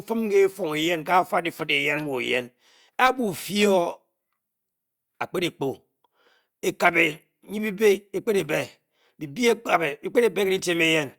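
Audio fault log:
No faults heard anywhere in the speech recording.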